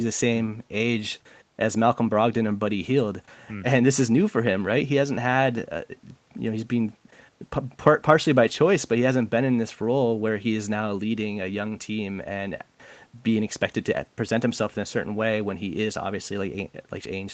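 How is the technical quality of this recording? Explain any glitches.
The recording has one glitch, a lost packet rebuilt from error correction, between 8.43 and 8.53 s. The audio stops at about 8 kHz, as expected for an Opus call at 24 kbps. In that window the sound turns briefly rougher and grainier for roughly 60 ms, which points to a few lost packets. Each was replaced by the lower-bitrate backup copy carried in the next packet, so playback never breaks. Unlike a dropout there is no gap, and unlike plain concealment the sound keeps its real shape instead of a smeared, buzzy stretch.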